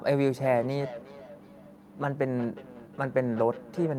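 From 0.36 s to the end, feedback echo between two devices: a nearby device replays the speech into this microphone, so each word returns roughly every 400 ms, about 16 dB down, thin and ringing. These are distinct delayed copies, not a smooth reverb tail.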